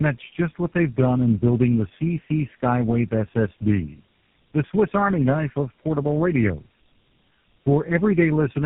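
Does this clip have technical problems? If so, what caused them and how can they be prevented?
Yes, tandem speech coding runs through the whole clip. The rough, muffled, warbly character, with nothing above 3.8 kHz, fits three low-rate speech codecs in a row, such as G.729A, AMR-NB and GSM full rate, each re-encoding the previous one's damage. To prevent it, keep one codec end to end or use transcoder-free operation so the audio isn't decoded and re-encoded at every link.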